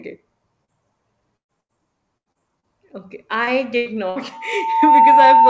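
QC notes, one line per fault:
0.65–0.71 s and 3.44–3.50 s: short concealed packet loss. About 30 ms never arrived, so the receiver stretched the previous sound across the hole, leaving a brief smear.
1.37–1.52 s, 1.61–1.74 s, 3.77–3.89 s, 4.10–4.19 s: bursts of packet loss. 60 to 120 ms went missing each time. The decoder held the last sound as a fading buzz or hiss, then jumped ahead. The first burst also drops to near silence for about 100 ms.
2.18–2.66 s: repeated packet loss (robotic sound). Four gaps, the longest 80 ms, left nearly a third of the stretch patched, so the sound turns choppy with pieces missing.
4.32 s to the end: loudspeaker feedback squeal. The mic-to-speaker loop took off at 899 Hz, swelling over roughly 0.7 s into a steady howl about 10 dB above the audio.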